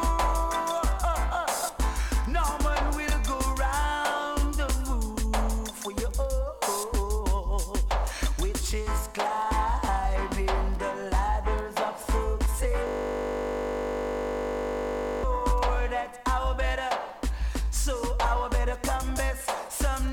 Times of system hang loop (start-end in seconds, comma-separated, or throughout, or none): 12.87-15.24